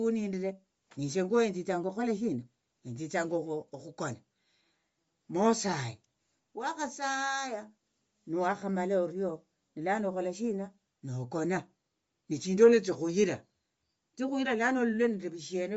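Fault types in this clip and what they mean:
Bluetooth LC3 compression: throughout the speech, the sound has a plainly audible breathy, grainy edge, and nothing is heard above about 7.7 kHz. This is likely LC3, the transform codec of Bluetooth LE Audio, working at a low rate that fits about 32 kbps with 10 ms frames. At that rate it discards much of the upper spectrum and replaces it with shaped noise, which gives the coarse texture.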